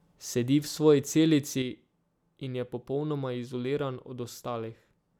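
A digital gain stage most likely stepped from one value to another between consecutive samples at 1.62 s, with no ramp to ease the change, and it stays at the new setting through the end of the clip. This sudden gain jump drops the speech by about 6 dB, roughly halving the signal level, and the background noise falls by the same amount at the same instant, so the whole recording abruptly sounds quieter rather than the talker simply speaking more softly.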